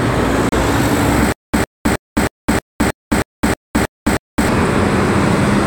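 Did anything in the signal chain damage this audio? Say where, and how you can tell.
Yes. At 0.49 to 0.52 s the sound drops to silence for 33 ms and then resumes where it left off. This is likely a Bluetooth stall in the wireless link: interference delayed packets, the headphones' buffer emptied, and playback paused until the resent data arrived.

From 1.32 to 4.48 s a 103 ms fragment repeats ten times, each followed by 213 ms of digital silence, on a steady 316 ms cycle. The audio that should have played in that stretch is gone. This stutter with silent gaps points to a playback or streaming stall, likely one where each retry replayed the last buffered fragment before running dry.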